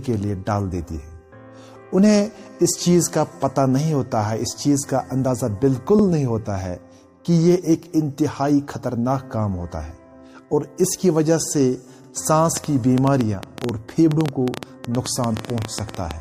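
Around 5.99 to 6.04 s, overlapping chunks: a block boundary near 6 s restarted early, so about 48 ms plays twice, heard as a brief stutter. From 12.57 s to the end, a train of clicks: likely electrical interference or a faulty connection injects about nine clicks per second at uneven spacing, popping well above the sound.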